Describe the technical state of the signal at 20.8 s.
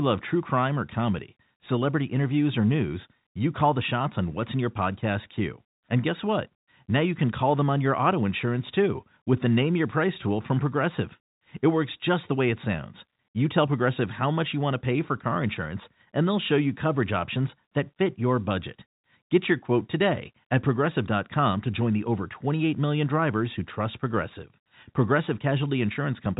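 At 20.8 s the speech is intact, carried as ordinary G.711 telephone coding with a band that stops around 3.8 kHz and only the faint level-following quantisation hiss that format brings.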